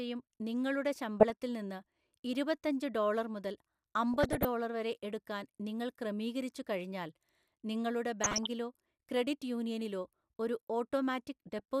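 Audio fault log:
1.20–1.30 s (just before "നിന്ന് ഇരുപത്തഞ്ചു"), 4.14–4.45 s, 8.21–8.47 s (after "എടുക്കാൻ നിങ്ങൾ ക്രമീകരിച്ചുകഴിഞ്ഞാൽ നിങ്ങളുടെ"), 11.48–11.60 s: DAB burbling. Small bit errors corrupt sub-band levels frame by frame, giving short noise blips and level jumps in single sub-bands over the speech rather than silent dropouts.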